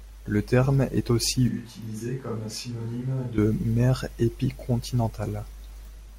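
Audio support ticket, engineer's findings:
Switch to a distant microphone, 1.49–3.38 s, right after "terme est aussi". Sudden roomy, hollow tone. Thinner low end. Level down about 10 dB. Room noise rises to roughly 25 dB below the speech. Likely close-mic dropout, fallback to a farther pickup. Abrupt return.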